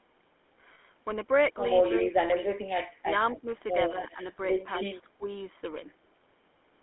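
Throughout, the speech runs through the GSM full-rate codec, with a narrow line band of 250 Hz to 3.5 kHz, which fits a 13 kbps full-rate coder. Its coarse pulse excitation and vocal-tract model leave a clearly audible buzzy, gravelly roughness.

At 0.74 s, lost GSM frames left a 40 ms gap, which fits two 20 ms frames. The decoder filled it by repeating the last good frame's settings, so the sound briefly holds as a rough, metallic ring.

At 1.98 s, 3.31 s and 4.74 s, a far end playing the call on a loudspeaker likely let its echo canceller pass part of the signal back. An echo leak appears as a delayed copy of the voice about a quarter second late, roughly 15, 20 and 10 dB below the speech.

From 2.03 to 2.69 s, 3.03 to 3.48 s and 4.97 to 5.25 s, both sides were likely talking at once, and the echo canceller turned both down. This speech suppression in double talk makes the voice dip, by as much as about 20, 10 and 15 dB.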